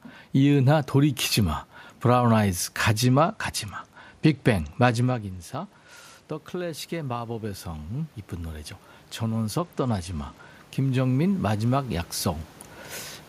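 A speech recording with two technical faults. A Bluetooth SBC bit pool drop strikes twice, from 3.03 to 6.31 s and again from 9.59 to 10.54 s. The link squeezed the encoder's bit budget, which fits a cut from bit pool 31 to 13 (around 94 kbps), so the treble dulls and gritty noise rises. A spectrogram would show the top bands going dark and speckled for those spans. Automatic gain rising then runs from 6.51 to 12.08 s. After the input level fell by about 13 dB, the gain control slowly added about 10 dB, so the voice and the room noise swell together. On a waveform this appears as a gradually widening envelope with a lifted noise floor between phrases. The level change near 5 s comes from the talker moving relative to the microphone, not from the system.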